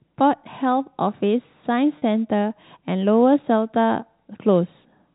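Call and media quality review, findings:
Packet loss with pitch repetition, 1.98–2.02 s: brief held, slightly buzzy sustain where about 40 ms of audio is missing, consistent with two 20 ms packets dropped. Receiver concealment repeats the last pitch period to bridge the gap. Path is G.711 telephone band, nothing above 4 kHz.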